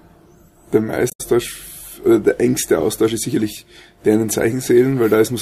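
A short burst of corrupted audio cuts into the audio from 1.09 to 1.21 s, and a briefer blip follows from 3.31 to 3.33 s. Both are damaged data in a compressed stream: corrupted bytes in the encoded file made the decoder misread the frames at those points and lose sync until it found the next valid frame header, so the intended sound is disrupted for about 0.12 s and then about 0.03 s.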